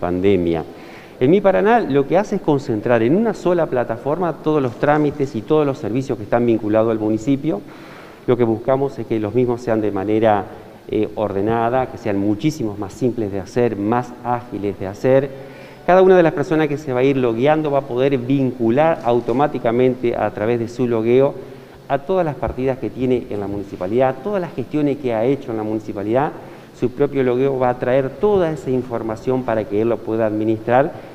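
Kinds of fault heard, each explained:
No kinds of fault are heard in this clip.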